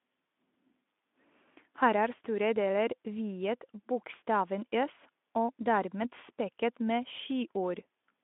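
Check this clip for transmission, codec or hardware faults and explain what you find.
No faults found: the speech comes over a Speex link at 15 kbps, band-limited to 200 Hz to 3.5 kHz with nothing above 3.8 kHz, and that narrow, lightly coded sound is normal for this path.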